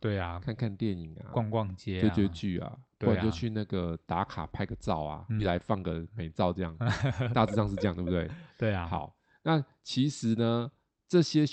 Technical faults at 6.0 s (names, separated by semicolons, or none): jitter buffer speed-up